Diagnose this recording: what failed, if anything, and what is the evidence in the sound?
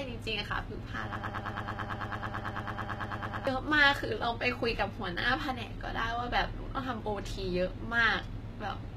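The whole clip has the gritty, metallic top end of HE-AAC compression, most likely a low-bitrate codec stage around 20 kbps. Sibilants sound lispy because the treble is rebuilt from copied lower bands rather than coded, and nothing reaches above 14.9 kHz.

From 1.16 to 3.47 s there's a broken-record loop: a 110 ms fragment repeats back to back about twenty times. That's likely a stalled playback or stream buffer resending the last chunk it held, so the speech due in that stretch is simply gone.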